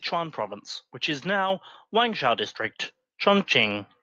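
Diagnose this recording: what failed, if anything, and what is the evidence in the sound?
The microphone volume stepped up at 1.5 s, just after "which is". Stage: call processing. Speech and background noise rise together by about 5 dB in one step. The call software judged the input too quiet and raised the device's input volume mid-speech.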